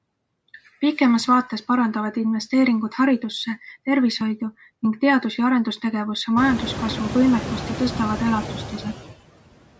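A noise suppressor works on the speech from start to finish, pulling down every band it takes for steady noise by about 20 dB, frame by frame. The background falls away between phrases and swells back under each stretch of speech. From around six and a half seconds the room noise climbs by about 23 dB, to about 12 dB below the speech.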